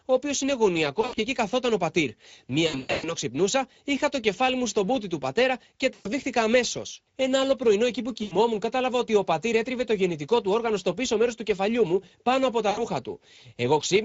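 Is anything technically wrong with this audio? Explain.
Yes. There are two faults: Speex codec damage throughout, and packet loss concealed by the speech codec at five points.

The whole speech clip passed through the Speex codec at a fairly low setting, which fits a bitrate around 17 kbps. This CELP coder has too few bits to describe the excitation signal, so it substitutes a coarse approximation. The damage is plainly audible: the voice sounds noisy and hoarse, and its upper range is a shaped, hissy fill rather than real detail.

The other fault is VoIP packet loss concealed by the speech codec. When packets failed to arrive, the decoder kept extrapolating from its last pitch and filter state and lowered the gain with each missing frame. These dropouts occur at:

1.01 to 1.2 s, with about 120 ms lost in scattered gaps.
2.67 to 3.13 s, between "εκεί καθόταν ο πατήρ" and "ξυπνούσα είχα το κεφάλι", with about 300 ms lost and the longest gap 120 ms.
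5.93 to 6.09 s.
8.23 to 8.36 s, between "άλλο πρωινό εκεί που" and "κατάλαβα ότι ο πατήρ".
12.69 to 12.84 s, just after "κεφαλιού μου πάνω από".

At each point the sound smears into a fading buzz or coloured noise, and it stays weak and distorted briefly after the packets resume.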